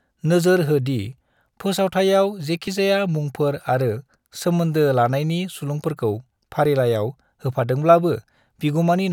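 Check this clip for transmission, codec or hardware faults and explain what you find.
The speech skips at 2.67 s and 6.65 s: a sliver of about 20 ms vanishes and the two sides butt together with no gap. The cause is likely audio missing between chunks, with a piece lost each time the recorder closes one 4-second block and opens the next.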